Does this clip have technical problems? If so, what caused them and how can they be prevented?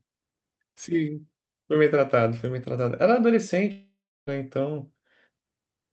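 Yes, there's a long network dropout from about 3.71 to 4.29 s. The speech smears into a buzzy, fading continuation of the last sound, then goes quiet for roughly a third of a second before picking up again with about 0.56 s of audio simply gone. That's the receiver covering for packets that likely never arrived, through a call path that also trims everything above 8 kHz. A steadier network connection, such as wired rather than Wi-Fi, or stronger packet-loss protection would help prevent it.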